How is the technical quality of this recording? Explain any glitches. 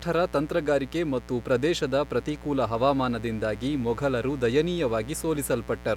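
The recording is compromised by one fault that runs for the entire clip: mains buzz. Sharp switching spikes from a dimmer, rectifier or poor shielding enter the signal path twice per 60 Hz cycle, producing a dense ladder of harmonics reaching into the kilohertz range. The result is a steady, raspy buzz sitting roughly 20 dB below the speech.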